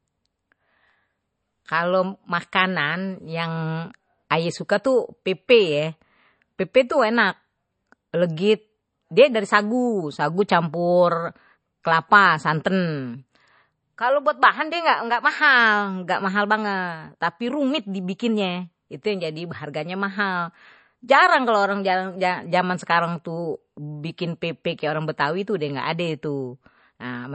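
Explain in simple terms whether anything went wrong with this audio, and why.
Something did go wrong, and it lasts the whole recording. The speech sounds dull and watery, with nothing at all above about 8.3 kHz, so s sounds lose their crispness and pick up a swirl. This is most likely MP3 compression squeezed hard. A simple treble filter would also cut the highs, but it would leave the rest clean. The swirly, fluttering texture comes from the encoder dropping quiet detail that flickers on and off.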